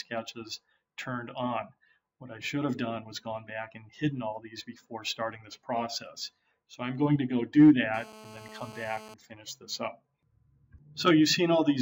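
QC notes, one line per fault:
7.94–9.14 s, GSM phone buzz: a hard, raspy 217 Hz buzz about 19 dB below the sound, held steady as a nearby phone in a call pulses its transmitter and the audio circuit rectifies each burst. Spectrogram shows a dense comb of evenly spaced harmonic lines; waveform shows regular spiky pulses.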